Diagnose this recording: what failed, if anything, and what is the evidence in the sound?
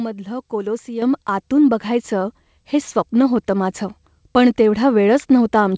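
At about 1.02 s the whole speech signal, voice and room background alike, jumps abruptly louder by about 7 dB and stays there. That is a microphone volume stepped up event at the call-processing stage. The software's automatic gain control judged the input too quiet and raised the device's input volume in a single step rather than ramping it, so everything ahead of the converter rises together. The audio also passes through the call codec, whose band stops at 8 kHz, which fits G.722.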